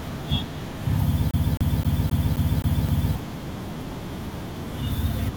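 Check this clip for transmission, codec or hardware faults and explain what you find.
One hardware fault is audible: from 1.31 s to 3.15 s the speech catches on a single fragment about 0.26 s long and repeats it seven times in a fast, even stutter, with a brief mute at each jump back. This is a CD stuck on one turn. A scratch on the disc knocks the laser back one track at the same point on every rotation, so the same short slice of audio replays until the player breaks free.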